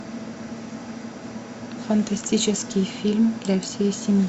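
No technical faults can be heard in the speech.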